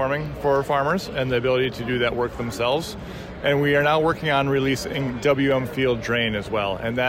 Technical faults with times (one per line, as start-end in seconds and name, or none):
0.91 dropped samples
2.72 dropped samples
6.06 dropped samples